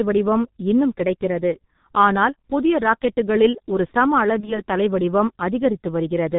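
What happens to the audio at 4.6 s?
Right around there you're hearing VoIP packet loss concealed by the speech codec, spanning roughly 4.40 to 4.62 s, just after "ஆனால் புதிய ராக்கெட்டுகளில் ஒரு" and before "தலை வடிவம்". The gap itself is short, consistent with a single 30 ms frame going missing. The decoder papered over it by replaying its last pitch and filter settings at dropping gain, so you get a brief stretched, fading stretch of buzzy tone or coloured noise. Because each frame leans on the previous one, the sound stays weak or distorted for about 200 ms total, well after the data comes back.

Underneath that, the whole clip carries heavy G.723.1 codec damage, which fits its 6.3 kbit/s mode. With nothing above 4 kHz and a slowly updating voice model working in 30 ms frames, everything comes out muffled and hoarse, and consonants blur together. That dull, rough backdrop is also what the concealment is extrapolating from at 4.6 s.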